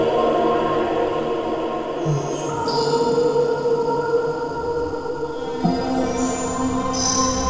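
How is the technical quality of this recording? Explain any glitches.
The music passed through a wideband call path, so it carries nothing above 8 kHz, and two glitches disturb its timing.

At 2.49 s there is a skip ahead. A stretch of audio, about a third of a second, was dropped either on the way or by the jitter buffer when it overflowed, while later audio was already waiting, and none of it was filled. Playback jumps straight to that later audio, so the music lurches forward with no gap, cutting part of a phrase and joining its two sides almost directly.

From 4.43 to 5.32 s there is a jitter buffer speed-up. The buffer held more audio than it aims for, so the receiver cut delay by repeatedly removing short pieces, one or a few pitch periods each, totalling about a tenth of a second. For just under a second the music runs at roughly 111% speed without changing pitch, sounding hurried and breaking its steady tempo.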